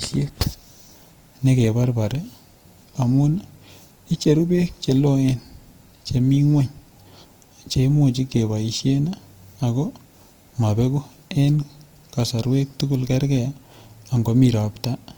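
Throughout, the likely cause is Opus compression in its music mode, which fits a 24 kbps stream and fills starved bands with folded energy and noise. The speech sounds plainly grainy and rough, with nothing above 20.4 kHz.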